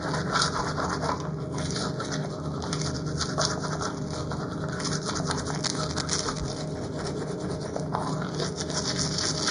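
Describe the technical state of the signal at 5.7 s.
At 5.7 s a burst of cable scratch noise is under way, running from 5.64 to 6.64 s. Dense, uneven crackle and rustle sits only a few decibels below the signal. The likely cause is a worn cable, connector or control being moved, so its contact resistance jumps rapidly.

Channel delay (comb filtering) is present here as well. One channel trails the other by roughly 0.2 ms, and the mono sum cancels at evenly spaced frequencies starting near 3 kHz. The fixed notches give the sound a hollow, phasey colour.

MP3 compression damage is plainly audible. Nothing remains above 9.8 kHz, and weak spectral detail flickers between frames, giving a watery, swirly texture with smeared attacks. This likely comes from a low-bitrate MP3 encode, which fits something around 50 kbps.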